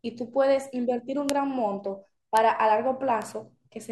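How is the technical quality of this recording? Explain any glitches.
Three isolated bit error spikes mar the speech, at 1.30 s, 2.37 s and 3.22 s. At each one a flipped bit throws one sample, or three in a row at 1.30 s, to a value a power of two away before it snaps straight back. Each is a single sharp, broadband tick, peaking at about -2 dBFS for the first two and about -14 dBFS for the last. Unlike a splice or dropout click, nothing in the surrounding signal changes, and the tick bears no relation to the sound.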